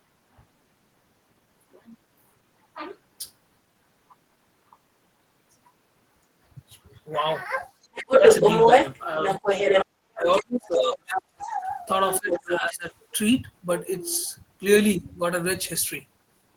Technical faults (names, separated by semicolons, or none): other side's voice leaking through; speech suppressed in double talk